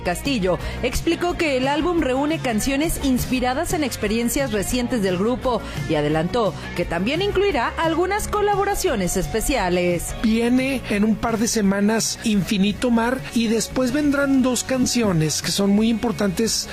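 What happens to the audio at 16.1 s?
A bit error spike at 16.07 s: one corrupted sample jumps to about -24 dBFS and returns, giving a single sharp broadband tick unrelated to the sound.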